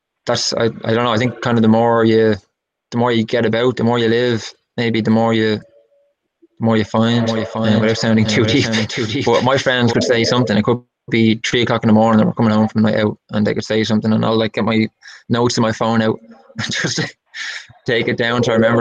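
From 7.21 s to 9.93 s the audio carries a doubled audio track: a second full-band copy of the same sound trails the original by around 0.7 s, roughly 5 dB quieter, with no decay or room colour of its own. It switches on and off abruptly at those edges. The likely cause is a slower second capture path or an edit holding two copies out of step. A spectrogram shows every pattern repeated, slightly dimmer, about 0.7 s later, and the waveform thickens with an offset shadow.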